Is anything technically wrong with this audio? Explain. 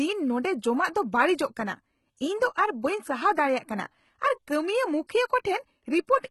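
Yes. Throughout the speech, the treble sounds heavily processed and synthetic, and nothing reaches above 11.8 kHz. The likely cause is HE-AAC compression: the top band is rebuilt from copied lower bands, not coded. The damage fits a very low bitrate, around 16 kbps, and s sounds come out gritty and lispy.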